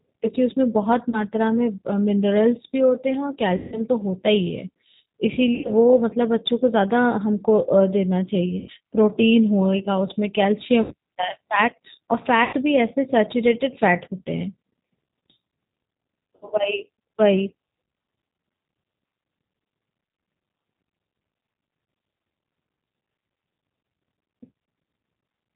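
From start to finish the speech runs through the G.729 codec at 8 kbit/s, the low-rate VoIP coder that rebuilds each 10 ms frame from a vocal-tract filter, a pitch predictor and a handful of pulses. The damage is plainly audible. Nothing above 4 kHz gets through, so the sound is muffled and telephone-thin, and it has that slightly rough, synthetic edge you get when speech is rebuilt from a model rather than carried as a waveform.

On top of that there are seven dropouts covered by VoIP packet loss concealment: 1.10–1.23 s, 3.57–3.82 s, 5.55–5.71 s, 8.59–8.71 s, 10.82–10.94 s, 12.44–12.55 s and 16.36–16.47 s. In each one the decoder ran out of real data and kept extrapolating from the last pitch and filter it had, turning the gain down frame by frame. So the sound smears into a buzzy tone or coloured noise that fades, and stays weak or a bit mangled briefly after real audio resumes.

The gaps mostly fit 30, 60 or 90 ms lost, roughly one to three packets. 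The one at 3.57 s is the worst, about 150 ms, which fits five packets in a row, and that's where the concealed sound stretches longest and fades furthest.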